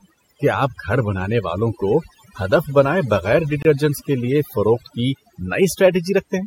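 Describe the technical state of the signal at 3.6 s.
At 3.62 to 3.65 s, between "کو ہدف بنائے بغیر" and "کے لیے فروخت کی", there is a gap between stream segments: a hard-edged hole of about 26 ms of pure silence where mismatched segment timestamps left space. Unlike a packet dropout, nothing is missing; the following speech simply arrives later. Overdone noise removal also affects this moment, with bands gated out around the noise estimate leaving twinkling specks in near-silence. It differs from codec smearing in those isolated tonal chirps.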